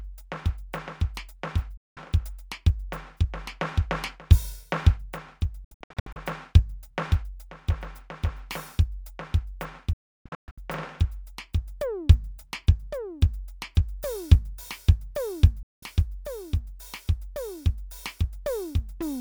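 The music cuts out at 1.77, 5.64, 9.93 and 15.63 s, a digital broadcast dropout where the receiver mutes over lost or corrupt frames. Each cut snaps off in about 3 ms. The 5.64 and 9.93 s ones stutter as scattered holes, the latter including a 0.32 s gap.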